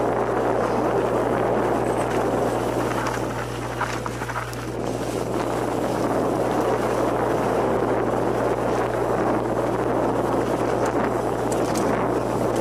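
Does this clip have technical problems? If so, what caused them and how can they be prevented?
Yes. A steady low tone at 60 Hz sits under the sound for the whole clip, at roughly 10 dB below the signal, which makes it loud enough to be clearly heard. This is mains hum: the power line's alternating current has leaked into the signal path, through a ground loop between connected devices or through magnetic coupling from a nearby transformer. The 60 Hz frequency points to a 60 Hz mains supply. To prevent it, power all equipment from a single grounded outlet, use balanced cables or a ground-loop isolator, and keep audio lines away from transformers and power cords.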